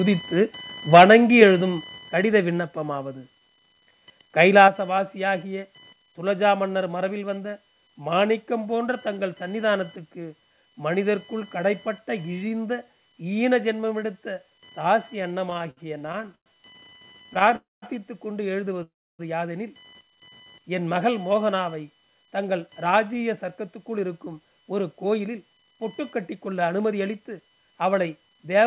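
A speech recording carried over a narrowband call path, with nothing above 4 kHz, consistent with G.711 A-law telephone coding. Computer activity noise runs throughout: a buzzing, chirping pulse train near 1 kHz, roughly 25 dB below the speech, that tracks processor or peripheral load rather than the talker, as ground currents from the machine leak into the audio circuit. Microphone overload flattens the loudest peaks from 0.93 to 1.42 s, pushing about 6 dB past the converter's limit, and briefly again from 4.61 to 4.65 s at about 1 dB over. The crackly, harsh edge on those syllables is most likely an input gain set too high for the converter. The microphone volume steps down at 0.98 s by about 3 dB, at 1.98 s by about 4 dB, and at 4.68 s by about 5 dB, each an abrupt drop in voice and background together, likely the pattern of automatic gain control in the call software. Repeated stalls (stutter) break up 15.5 to 16.48 s, with many short hitches, the longest about 110 ms and nearly a third of that span filled in, and again from 16.9 to 17.54 s with briefer hitches up to 36 ms. 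The jitter buffer repeatedly ran dry and stretched the last sound. Call audio freezes follow from 17.56 to 17.84 s and from 18.83 to 19.21 s, lasting about 260 ms and 360 ms. Each is a fading continuation that falls silent for 200 and 300 ms before the speech resumes intact, likely from packets held up in transit. A jitter buffer slow-down from 20.29 to 20.6 s plays at 87% speed with unchanged pitch, adding about 50 ms of drawn-out sound. A jitter buffer speed-up from 22.07 to 28.62 s runs at 109% speed with unchanged pitch, trimming roughly half a second in total to drain excess buffered delay and leaving the delivery hurried.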